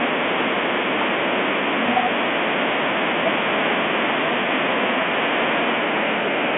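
Bluetooth CVSD headset codec damage runs through the entire speech clip: the audio is confined to roughly 200 Hz to 3.5 kHz with nothing above 3.8 kHz, and the one-bit slope coding, which fits a 64 kbps link, plainly audibly roughens loud high-frequency sounds and leaves granular hiss.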